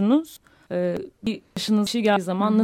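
It's a speech clip with audio missing between chunks: skips at 0.37, 0.97, 1.27, 1.57, 1.87 and 2.17 s, each losing about a fifth of a second, likely from 0.5 s chunk handoffs.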